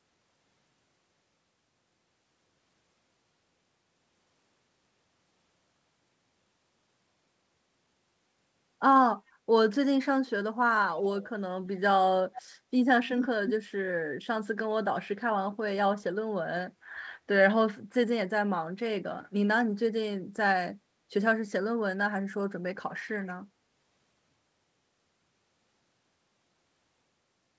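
At 10.96–11.3, 12.35–12.42, 13.08–13.28 and 13.46–13.54 s, a delayed copy of the speech returns 281 ms late, likely echo leak. It grows from about 20 dB to about 5 dB below the speech, visible as time-shifted duplicates of the speech patterns on a spectrogram.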